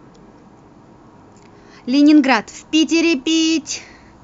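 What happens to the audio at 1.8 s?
Nothing goes wrong at 1.8 s: the speech carries on intact through that moment, with no dropout, click or distortion to be heard.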